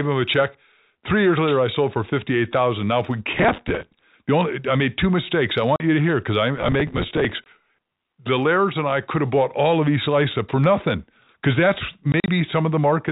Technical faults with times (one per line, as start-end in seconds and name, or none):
3.34-4.02 processor overload crackle
5.76-5.80 packet loss filled with silence
6.58-8.12 processor overload crackle
7.44 packet loss filled with silence
12.12-12.28 packet loss filled with silence